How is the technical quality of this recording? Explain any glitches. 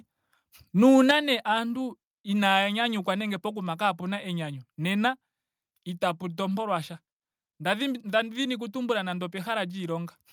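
The recording has two linked glitches near the start.

From 0.87 to 1.11 s there is microphone overload. Peaks run about 4 dB past the converter's limit. A small fraction of samples are flattened, giving a harsh crackle.

At 1.11 s, just before "nee aantu inaaya nyanyukwa", the microphone volume steps down. Everything drops about 6 dB at once. The call software likely lowered the input after the clipping.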